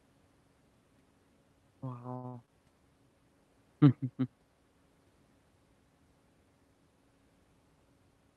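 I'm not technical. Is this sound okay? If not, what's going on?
No. Around 2.15–2.26 s, 2.27–2.37 s and 2.46–2.51 s, short stalls from late packets hold the speech briefly while the call waits for delayed audio, then it resumes.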